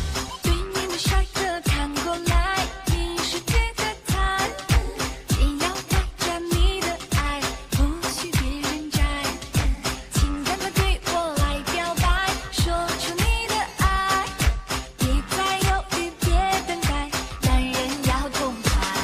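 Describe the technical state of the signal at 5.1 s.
At 5.1 s the signal is intact, with no dropout, distortion, glitch or other technical fault audible at that moment.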